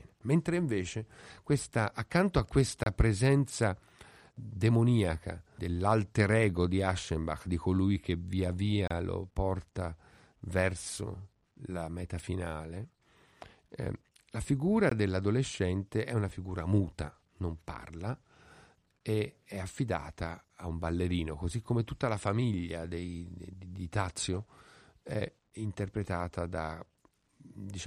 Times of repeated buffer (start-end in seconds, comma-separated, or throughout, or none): none